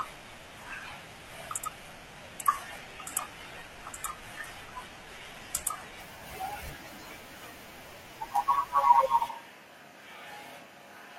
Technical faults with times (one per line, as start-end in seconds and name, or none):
0.00-6.00 adaptive stream starting at a low bitrate
9.30-11.18 switch to a distant microphone